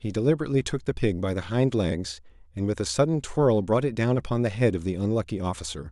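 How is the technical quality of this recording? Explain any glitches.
Good news, there's nothing to explain here, since no glitches turn up anywhere in this recording.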